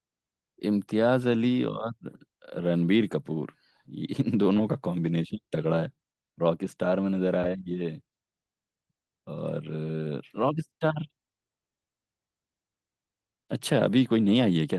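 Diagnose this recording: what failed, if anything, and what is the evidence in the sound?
Nothing here points to a failure at any stage: the only processing you can hear is Opus voice compression at 24 kbps in its fullband hybrid mode, which leaves a light touch on the speech and is simply doing its job.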